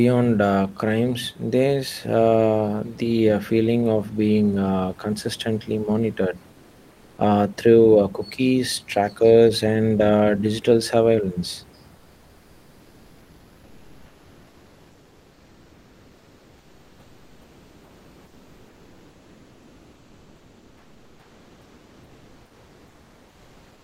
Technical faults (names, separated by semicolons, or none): comfort noise in place of the background